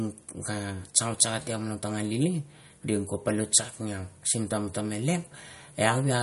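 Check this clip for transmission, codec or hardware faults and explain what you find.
One fault runs throughout: the speech has likely been through MP3 compression, with damage that points to a low bitrate near 48 kbps. Short of bits, the encoder removed everything above 11.2 kHz and let weak frequency lines drop in and out, leaving the sound dull and audibly watery.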